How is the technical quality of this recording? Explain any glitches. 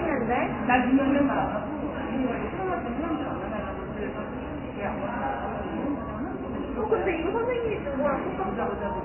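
Poor: heavy codec damage runs through the whole recording. The fault is MP3 compression: nothing above 3 kHz, watery, swirling textures and smeared transients. This fits a very low MP3 bitrate, around 16 kbps, that likely forced the encoder to cut the treble and drop weaker frequency components that flicker frame to frame.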